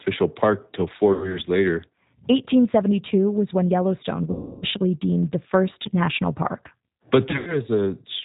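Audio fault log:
Throughout: G.729 codec. The speech has the plainly audible roughness of this 8 kbit/s codec, which fits the G.729A variant. The voice is rebuilt from a vocal tract filter, a pitch predictor and a few pulses per frame, so it comes out a bit synthetic, and nothing above 4 kHz survives.
1.13 to 1.39 s: VoIP packet loss concealed by the speech codec. About 100 ms of audio went missing, which points to ten lost frames. The decoder kept stretching its last pitch and filter at falling gain, so you get a fading buzzy or noisy smear, and the voice stays weak for a moment afterwards.
4.31 to 4.65 s: VoIP packet loss concealed by the speech codec. This is the longest gap, about 310 ms lost. The extrapolated sound fades as the gap goes on, and because each frame leans on the previous one the voice comes back thin and distorted for a while.
7.29 to 7.57 s: VoIP packet loss concealed by the speech codec. 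About 140 ms is lost in scattered bursts across 180 ms, the longest run being 100 ms. It sounds like a choppy patch of stretched, fading fill with brief returns of speech, each one still weakened by the concealment.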